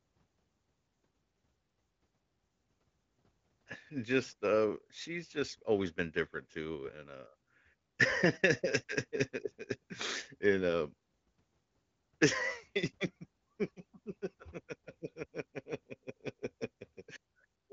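Nothing stood out on listening to this speech, which carries the AMR wideband (HD Voice) codec's usual band limit, with nothing above about 7.6 kHz.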